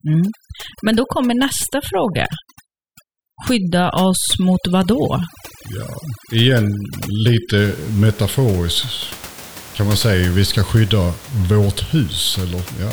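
From 0.0 to 7.58 s, overdone noise removal gates bands near the noise estimate: the background drops and breaks up into twinkling, warbling specks, and the spectrogram shows a blank background scattered with isolated specks.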